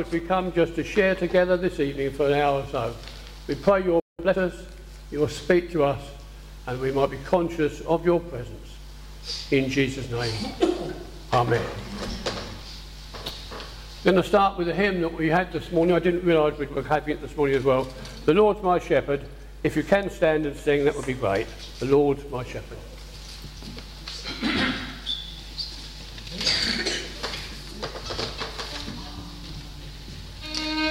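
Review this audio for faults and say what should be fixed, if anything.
At 4.00 s the sound cuts out abruptly. Silence lasts about 0.19 s, until 4.19 s. It then resumes where it stopped. This playback stall is likely the player running out of buffered data or having its audio thread blocked. A larger playback buffer and a higher-priority audio thread would prevent it.

From 4.19 to 4.37 s the sound rushes forward at twice normal speed. The pitch stays normal. This is time-compressed catch-up. The player recovers its lost time by cutting out small slices and cross-fading the gaps. Removing the stall would remove the need for this catch-up.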